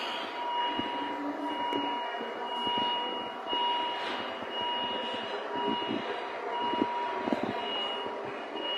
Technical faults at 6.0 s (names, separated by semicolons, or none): none